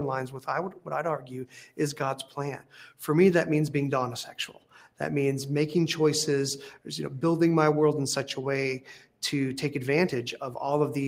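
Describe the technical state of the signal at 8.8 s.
A noise suppressor built for speech is running on material it wasn't designed for: a noise suppressor applied to music or sounds. Throughout the clip it treats steady tones, ambience and tails as if they were background noise and pulls them down by a few decibels, then lets them back up when something sharper arrives. The result is a pumping and thinning, with sustained parts sinking while attacks pass through largely intact.

At 8.8 s a sound is cut by the noise suppressor, and the cut lasts until 9.22 s. Here the processor misjudges the sound as noise and attenuates it far harder than the surrounding material, with the deepest drop reaching about 12 dB. Altogether around a third of a second within that span is audibly pushed down. The steady or decaying portion dips away or has its fade clipped short, so the sound seems to shrink or vanish early rather than ring out naturally.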